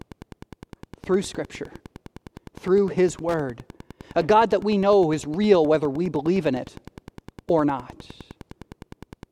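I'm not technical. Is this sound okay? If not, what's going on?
No. A steady ticking runs under the speech for the whole clip, about ten ticks a second. This is Wi-Fi interference: a nearby Wi-Fi radio's beacon, sent every 102.4 ms, is picked up by the audio circuit and heard as a quiet but distinct tick.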